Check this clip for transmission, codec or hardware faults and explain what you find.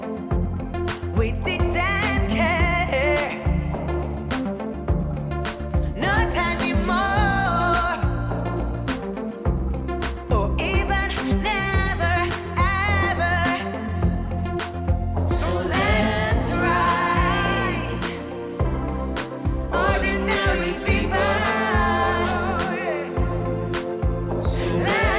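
I find no faults to report in this clip.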